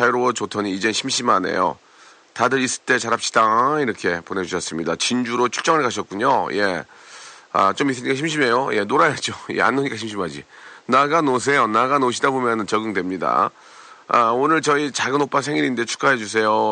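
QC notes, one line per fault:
Nothing stood out on listening to this speech; the only background sound is the room noise, well below the voice.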